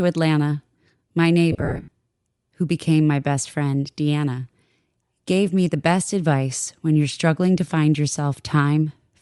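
Throughout the speech there is a plainly audible breathy, grainy edge on the upper frequencies, likely Bluetooth LC3 compression. The transform codec, working in 10 ms frames at a rate that fits about 48 kbps, discards upper spectral detail and fills it with noise.

From 1.52 to 1.91 s, lost LE Audio frames cause the decoder to conceal the gaps by repeating the last spectrum with randomised phase. About 260 ms of audio is lost in scattered gaps, the longest about 70 ms.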